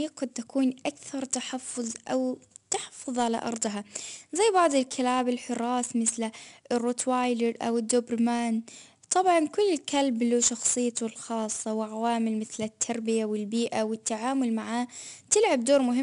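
A gritty hiss rides on every loud syllable throughout, with nothing above 10.6 kHz. This is 4-bit ADPCM compression, whose prediction steps leave level-following noise.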